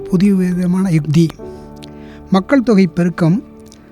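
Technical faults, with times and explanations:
1.30–1.33 s, loud pop: one sharp pop rises a few decibels above the sound, which continues beneath it. A sudden voltage spike is the likely cause.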